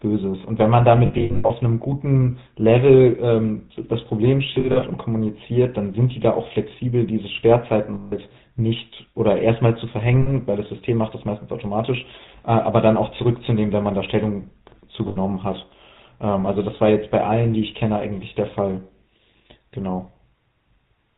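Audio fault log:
throughout: GSM full-rate codec. The speech has a plainly audible buzzy, gravelly roughness, and nothing comes through above 4 kHz. The codec rebuilds the voice from a vocal-tract model driven by sparse regular pulses, which fits a 13 kbps GSM stream.
1.06–1.51 s, 4.54–4.83 s, 7.94–8.13 s, 10.22–10.31 s, 15.08–15.17 s: lost GSM frames. Each spot turns into a rough, metallic ring. The decoder held the last good frame's settings. The first two losses are scattered in short runs, up to about 70 ms.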